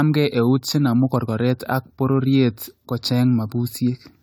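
Throughout the speech, generation loss is audible: swirly, smeared high end, a hollow midrange and softened consonant attacks. This is likely from roughly seven successive AAC-LC re-encodes, around 96 kbit/s by the sound, each requantising on a shifted frame grid. Content stops at 20 kHz.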